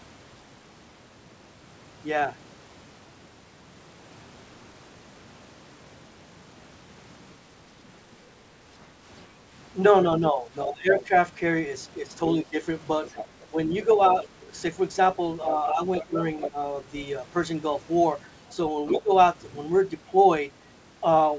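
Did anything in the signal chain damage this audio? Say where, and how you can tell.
Yes. Speech suppressed in double talk at 10.19–11.11, 12.37–12.56, 13.51–14.5, 15.72–16.55 and 18.94–19.11 s: dips up to about 20 dB, likely the call's echo canceller ducking during overlap.

The other side's voice is leaking through at 13.06–13.46, 15.55–16.5 and 18.88–19.02 s, about 10–15 dB down. That's likely residual loudspeaker echo the canceller missed.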